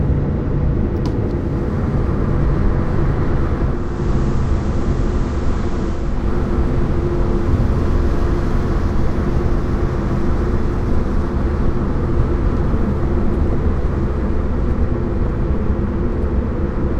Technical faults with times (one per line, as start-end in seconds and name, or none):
3.64-6.35 digital radio blending to analogue